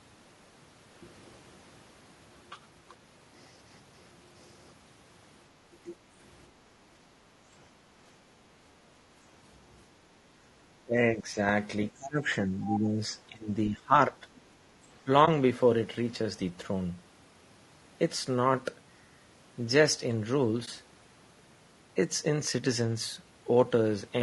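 From start to finish the speech has a rough, grainy texture, with a hiss-like haze filling the gaps between the harmonics and a top end that sounds thin and synthetic. This is the signature of low-delay AAC compression, likely AAC-ELD at around 32 kbps. Its short frames cannot separate closely spaced pitch harmonics well, so at this bitrate the coder smears noise between them and simplifies the highest band, and the damage is plainly audible.

Speech suppressed in double talk appears at 5.83–5.95 s, 10.83–11.37 s, 11.91–12.30 s, 12.47–13.50 s, 13.69–14.16 s and 15.04–15.09 s. In each window the voice sinks by roughly 15 to 20 dB and then recovers. The dips cluster most densely between 10.8 and 14.2 s. The likely cause is an echo canceller that heard both sides talking at once, could not tell the local talker from the loudspeaker echo, and attenuated everything.

AAC frame loss with muting occurs at 15.25–15.28 s and again at 20.65–20.68 s. 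Each is a brief dip, where the sound fades out and straight back in. The gap is consistent with a single lost frame of about 20 ms. The decoder zeroed that frame's spectrum, and the overlapping windows either side blurred the edges into a short fade rather than a hard cut.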